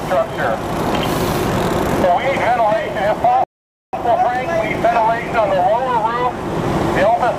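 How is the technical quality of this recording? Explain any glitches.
There's one glitch worth flagging: a rebuffering stall from 3.44 to 3.93 s. The player ran dry of downloaded audio and paused until more arrived, so the sound drops to silence for about half a second, then picks up exactly where it left off. Nothing's missing; it just adds roughly 490 ms.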